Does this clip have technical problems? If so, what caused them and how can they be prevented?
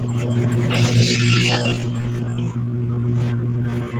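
Yes. Opus voice compression runs through the whole clip. The speech sounds hoarse and faintly robotic, which points to a low rate of about 16 kbps in hybrid mode: a linear-prediction core with a thin coded layer above 8 kHz. Unlike MP3-style damage, there is no swishy pre-echo, only a coarse, buzzy texture. To prevent it, encode at a higher bitrate.

From 1.0 s to the end there is a time-stretched section. The pace drops abruptly to about 0.63 times normal speed and the speech drags, likely from software stretching the audio to fit a length by repeating short pieces. A plain playback slowdown would also lower the pitch, but here the pitch stays unchanged. To prevent it, edit the content to length rather than stretching it.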